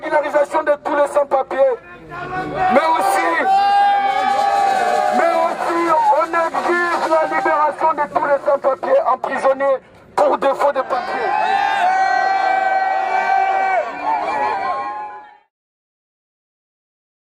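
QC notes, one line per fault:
No faults found.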